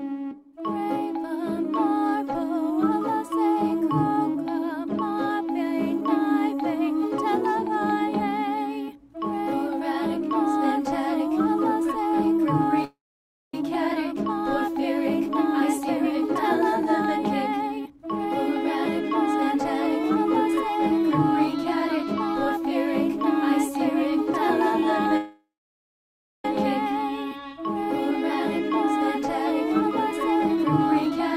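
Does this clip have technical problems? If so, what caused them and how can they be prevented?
Yes. Call audio freeze occurs at 12.84 to 13.54 s and again at 25.17 to 26.45 s. Each time the sound stops moving, the last moment is carried on briefly and then dies away into silence for about 0.58 s and 0.99 s. It resumes exactly where it left off, so gaps of 0.69 s and 1.27 s are inserted and nothing is lost. The likely cause is packets held up in transit, leaving the receiver's jitter buffer empty. A steadier, less congested network path with prioritised real-time traffic would prevent it.

Jitter buffer speed-up follows at 15.61 to 16.28 s (115% speed), 16.81 to 22.58 s (110%), 28.11 to 29.26 s (105%) and 29.70 to 31.36 s (113%). The audio runs fast at an unchanged pitch because the receiver repeatedly cuts out tiny pitch-period slices to drain the backlog left after late packets arrive together. 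That is roughly a tenth of a second, half a second, well under a tenth, and 0.2 s respectively. Preventing the delay spikes that cause freezes would also remove the need for this catch-up.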